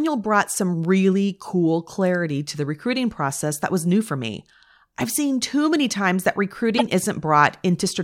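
At 6.77 to 6.82 s, a corrupt frame decoded disrupts the speech: roughly three frames with damaged bits were played anyway, misplacing energy across frequencies. It is heard as a brief chirp, blip or noise burst. A spectrogram shows an out-of-place smear, and the waveform a spike near -5 dBFS.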